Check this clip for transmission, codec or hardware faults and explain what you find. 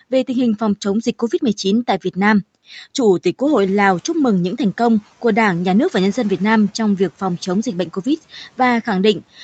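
One fault is audible. From 3.46 to 4.03 s the noise suppressor is catching up. The room noise jumps sharply, and the suppressor's noise estimate lags behind it, so the noise passes through with less reduction at first and then sinks by about 6 dB over 570 ms, ending just before "mừng những thành công".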